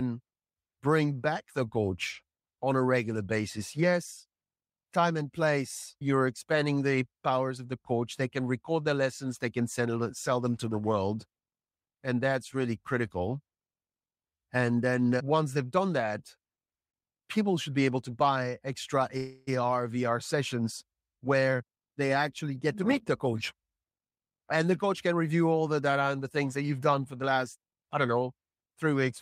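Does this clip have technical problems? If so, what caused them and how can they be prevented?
Yes. At 19.17 to 19.49 s a call audio freeze holds the sound for about 0.3 s. The last sound is stretched into a fading buzz or hiss, likely because packets stalled and the jitter buffer ran dry. Nothing is lost, but the speech after it arrives 297 ms late. On a spectrogram this shows as a smeared, decaying band with no new detail. A deeper or adaptive jitter buffer and a steadier network path would prevent it.

From 21.21 to 24.17 s a jitter buffer speed-up runs the speech at 110% speed without changing its pitch. It sounds hurried because the receiver cut out short pitch-period pieces, roughly 300 ms in total, to drain the excess delay. The waveform shows syllables packed more tightly. Gentler, slower catch-up settings would prevent it.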